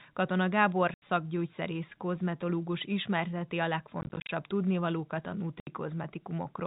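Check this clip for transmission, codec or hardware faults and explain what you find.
There's packet loss filled with silence, three times, over the G.711-coded telephone band. At 0.94–1.02 s, after "kozmetológus ismerteti a" at 4.01–4.29 s (scattered gaps, longest 40 ms), and after "tudnivalókat a" at 5.6–5.67 s, lost packets were replaced by silence. The holes fit 10 ms packets and start and stop abruptly, so you hear hard-edged dropouts.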